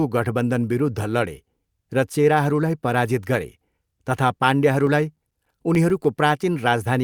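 From 4.72 s to 6.05 s the speech is broken by CD scratch ticks: ten short clicks or micro-dropouts at a steady rate of about seven per second, each lasting no more than a few milliseconds. A blemish on the disc corrupts more data on every revolution than error correction can restore, so the player patches or mutes those samples. On a waveform they show as evenly spaced notches or flattened slivers. A spectrogram shows a picket fence of thin vertical broadband lines.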